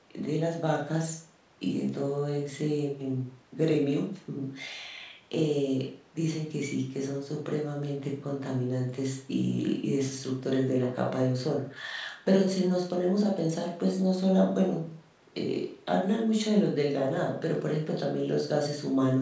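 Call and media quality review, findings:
Nothing to flag on this speech, since the call microphone processing is doing its usual job of trimming the lowest bass and keeping everything below 8 kHz, which is just how a call path sounds.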